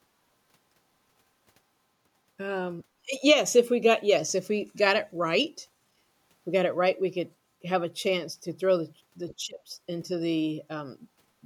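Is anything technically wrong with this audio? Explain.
Yes. From 9.31 to 9.35 s, the other side's voice leaks through, a faint scrap well below the talker. An echo canceller likely left loudspeaker sound in the microphone.

From 9.37 to 9.71 s, speech is suppressed in double talk. The talker's voice drops by as much as 20 dB for around a third of a second. Both sides likely talked together, and the canceller turned everything down.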